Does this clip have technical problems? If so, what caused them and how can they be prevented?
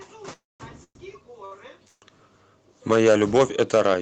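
Yes. Four kinds of fault are audible, all within a call path whose high end stops at about 8 kHz.

The call audio freezes at 0.33–0.62 s, 0.84–0.97 s and 1.87–2.04 s. Each time, the last sound is held and fades into silence lasting about 210 ms, 80 ms and 60 ms. The audio then resumes from the same point, so nothing is lost but the timing is pushed back by 264, 113 and 146 ms. This is likely caused by packets being held up in the network long enough to drain the jitter buffer. To prevent it, use a wired or less congested connection and allow the jitter buffer more headroom.

There is a short stall from a late packet at 1.45–1.53 s. One packet missed its playout time, and the receiver stretched the preceding sound for 62 ms until the packet arrived. It then continued without losing any content, leaving a briefly held sound with a slight buzzy dip. Jitter of this size is absorbed if the network path is kept stable and the jitter buffer is allowed to adapt upward.

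Microphone overload runs from 2.91 s to 3.95 s. The loudest peaks exceed the converter's limit by about 6 dB, so their tops are flattened and a small share of samples is clipped. This gives those syllables a harsh, crackling edge. The likely cause is an input gain set too high for the level at the microphone. Lowering the input gain, or moving the microphone farther from the mouth, keeps peaks below full scale.

The microphone volume is stepped down twice, at 2.94 s by about 2 dB and at 3.95 s by about 6 dB. Each time, voice and background drop together in a single step. The second step comes right at the end of the clipped stretch, so the likely cause is the call software's automatic gain control reacting to the overload. Setting a correct input level beforehand, or disabling automatic microphone gain adjustment, avoids these sudden level drops.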